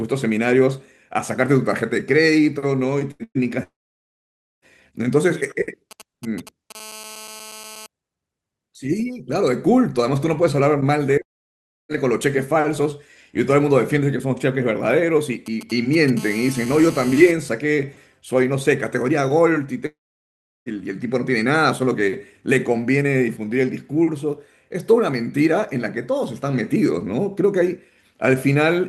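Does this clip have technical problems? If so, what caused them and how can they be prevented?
Yes. Two bursts of packet loss at 3.11–3.23 s and 3.24–3.38 s remove about 80 and 120 ms of speech. The receiver stretches the last sound into a fading buzz or hiss, and the second gap ends in a brief silence. On a waveform, these show as smeared, decaying repeats; a spectrogram shows frozen harmonics that fade out. A larger jitter buffer with forward error correction would help prevent this.

Long network dropouts at 3.63–4.65 s, 11.22–11.92 s and 19.86–20.69 s lose about 1.0, 0.68 and 0.8 s, likely from the connection stalling. Each begins with a short concealment tail, then goes flat and blank on both waveform and spectrogram until the speech resumes. A more stable wired or strong wireless link would prevent this.

GSM signalling bursts at 5.91–6.72 s and 15.46–16.19 s are a galloping dit-dit-dit of short 217 Hz buzzes, roughly 15 dB below the speech. 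A nearby 2G phone's radio pulses are being rectified by the audio circuit. On a spectrogram, they appear as clustered vertical stripes. Keeping phones well away from the equipment would prevent this.

GSM phone buzz at 6.75–7.86 s and 16.19–17.31 s is a hard, raspy 217 Hz tone, about 17 dB below the speech. It comes from the same rectified 2G bursts, now continuous during a call. A spectrogram shows an evenly spaced comb of harmonics. Shielded cabling and distance from phones would prevent it.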